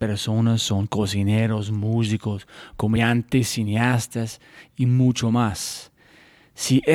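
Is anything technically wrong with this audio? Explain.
Yes. At 2.95 s a brief 18 ms glitch marks damaged data in the compressed stream: the decoder misread corrupted frames and resynchronised at the next header.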